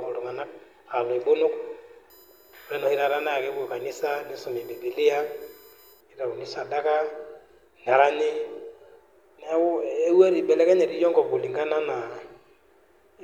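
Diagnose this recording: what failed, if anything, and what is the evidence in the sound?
USB whine on the analogue side, from power or ground: between 2.10 and 6.01 s a fixed-pitch tone built on 1 kHz sits roughly 30 dB below the speech, strongest at its 13 kHz harmonic. The bus's 1 ms frame current is leaking into the audio path.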